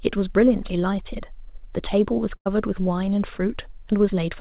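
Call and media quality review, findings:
Burst of packet loss, 2.36–2.48 s, jitter buffer concealment: 95 ms held, fading sound, then 100 ms skipped. Spectrogram shows a smeared flat band; waveform shows a decaying envelope.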